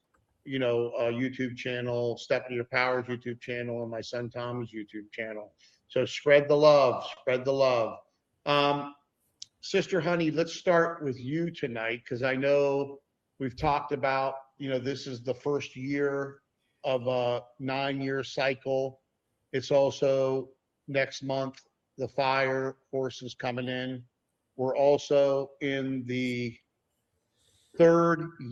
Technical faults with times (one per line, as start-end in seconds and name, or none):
0.00-28.51 clock drift between sender and receiver
0.02-28.34 repeated timing corrections
7.14-7.19 short stall from a late packet